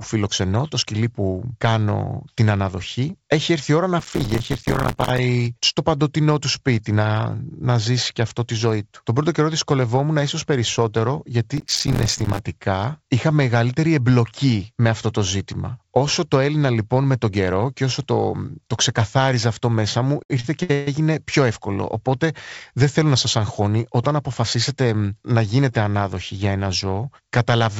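From 4.00 to 5.18 s and again from 11.58 to 12.39 s there's processor overload crackle: lots of missed, roughly 5 ms buffers dropping to silence, giving a gritty tearing over the speech.

At 20.23 to 20.88 s come repeated stalls (stutter): the jitter buffer ran dry four times, and the last sound was stretched to fill about 300 ms, the longest gap 134 ms, so it drags without losing anything.

Then, from 22.72 to 24.94 s, a jitter buffer speed-up trims around a fifth of a second of pitch periods, so the speech runs about 8% faster at the same pitch and sounds hurried, all through G.722 with nothing above 8 kHz.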